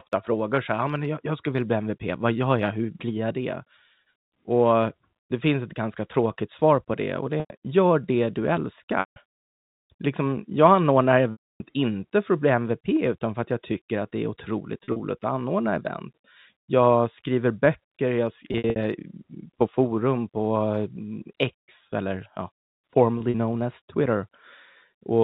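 Packet loss with pitch repetition breaks up the speech at 7.40–7.50 s, 9.00–9.16 s, 11.32–11.60 s, and 14.84–15.00 s between "att det är otroligt" and "att anordna event". It recurs at 18.49–18.76 s after "skriver böcker jag" and at 23.18–23.34 s before "known as". The receiver repeats the last pitch period to cover the missing audio, giving a held, buzzy sound. At 11.32 s the 280 ms gap outlasts that fade and drops to silence before the speech cross-fades back. The last three are scattered losses with runs of up to 40–60 ms. The speech passes through G.711 telephone coding, limited to 4 kHz.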